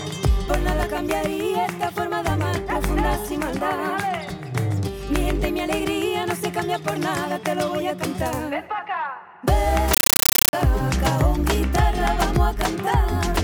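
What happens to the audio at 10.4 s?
From 9.94 to 10.53 s, a compressed stream is played as audio: AC-3 data reaches the output undecoded. Each frame becomes a 9.3 ms burst of noise plus silent padding, repeating at 31.25 Hz as loud, chattering static. That steady rhythm distinguishes it from random noise bursts.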